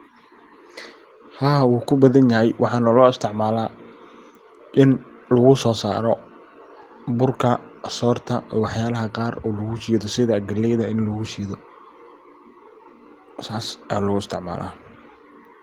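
Nothing stood out as a technical problem on listening to this speech recording.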